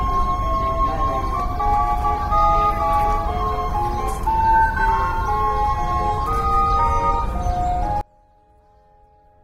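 From 8.01 s to the end at 9.44 s, the everyday sound collapses to a faint residue, roughly 32 dB quieter than before. The likely cause is one channel inverted: with one stereo channel's polarity reversed, everything common to both channels cancels when they are summed to mono, leaving only the small difference between them. The abrupt, deep drop with a remnant still audible points to this cancellation rather than a simple gain change.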